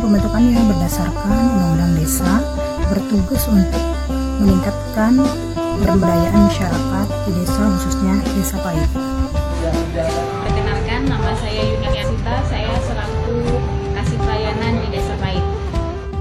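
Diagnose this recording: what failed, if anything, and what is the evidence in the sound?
Frames out of order at 5.84–6.04 s and again at 11.83–12.04 s, a network or transport fault upstream of the decoder. Each stretch is about 0.2 s of garbled flutter. Two neighbouring blocks of about 93 ms each, consistent with two codec frames apiece, arrived swapped and were decoded in that order, so the halves play exchanged. Nothing is dropped, and the clip's timing stays intact.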